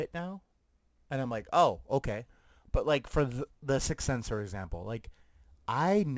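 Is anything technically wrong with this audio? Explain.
Yes. Throughout the speech there's aliasing. It sounds like it was downsampled to 16 kHz with no proper anti-alias filter first, so anything above the 8 kHz fold point mirrored back down into the audible band. That folded energy lands at wrong, unrelated frequencies, sitting roughly 25 dB under the signal. You hear it most on sibilants, which come out gritty and a bit metallic, and the spectrum runs right up hard against the band edge.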